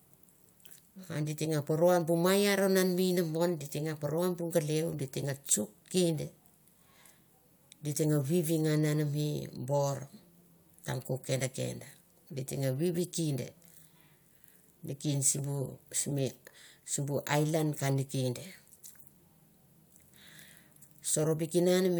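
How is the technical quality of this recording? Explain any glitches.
One glitch stands out: compressed frames skipped at 20.83 s. The decoder never played a short run of the encoded stream, most likely because those frames were missing or rejected as corrupt, so playback jumped ahead by roughly two frames, around 40 ms of audio, which fits a frame length of about 21 ms. The join comes out as a small leap forward in the speech.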